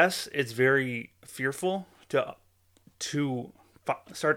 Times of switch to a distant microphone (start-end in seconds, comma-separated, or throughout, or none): none